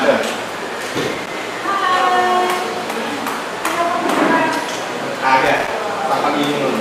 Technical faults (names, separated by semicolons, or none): loose connector crackle